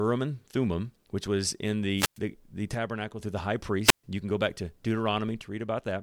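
From 1.96 to 2.19 s, after "which was in", there is a wireless microphone squelch dropout. The radio signal fades, and the receiver's squelch mutes the output for about 104 ms. Hiss rises, a near-silent hole follows, and the sound returns at "the the".

From 2.75 to 3.19 s, the level falls abruptly by about 6 dB, then recovers before "through the high". This is likely one channel dropping out, with the mono sum losing half of what both channels shared.

From 3.84 to 4.04 s, after "through the high", a second squelch dropout mutes the audio for about 133 ms, with the same hiss and gap.

From 5.41 s to the end, the same 6 dB drop returns.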